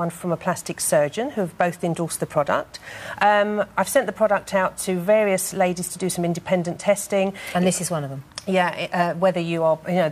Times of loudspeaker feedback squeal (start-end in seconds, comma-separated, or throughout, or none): none